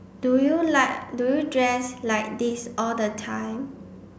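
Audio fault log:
No audible faults detected.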